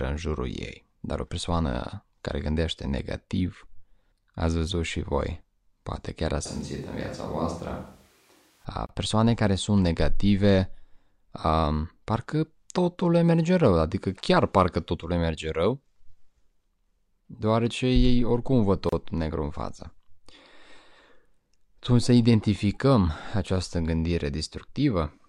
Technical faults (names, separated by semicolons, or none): switch to a distant microphone; gap at a join of encoded pieces